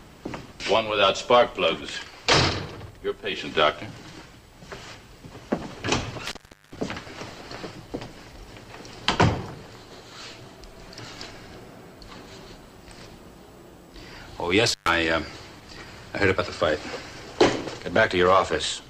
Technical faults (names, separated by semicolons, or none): damaged data in a compressed stream; intermittent contact